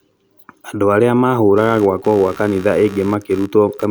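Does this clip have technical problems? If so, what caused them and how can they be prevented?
Yes. From 1.56 s to the end at 3.91 s, a faint, buzzy chirping runs well below the speech, pulsing around 70 times a second. This is computer activity noise: swings in processor or graphics load disturb the ground the audio circuit shares with the computer. An external audio interface or a ground-loop isolator keeps that noise out of the recording.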